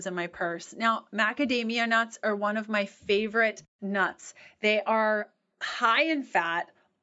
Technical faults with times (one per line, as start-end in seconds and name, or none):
none